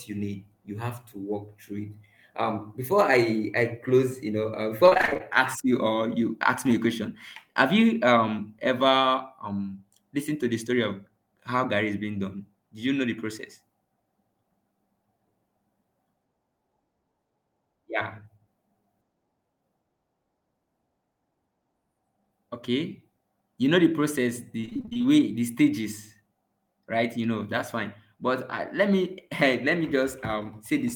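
Repeated packet loss strikes twice, from 4.85 to 5.21 s, between "close you know uh" and "ask you or you", and from 24.61 to 25.06 s, after "you know the process" and before "the stages". In each stretch, data arrived missing or late again and again in gaps of up to 25 ms, and the receiver filled each hole by extending the preceding sound, so about half of each span is patched. The speech turns choppy and robotic, with fragments missing.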